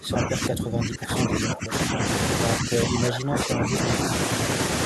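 An echo canceller, likely unable to separate the talker from loudspeaker echo while both sides spoke, turned the speech down: speech suppressed in double talk. The speech sinks by around 20 dB from 0 to 1.73 s, dips slightly at 1.91–2.04 s, then drops around 15 dB from 2.6 to 3.87 s.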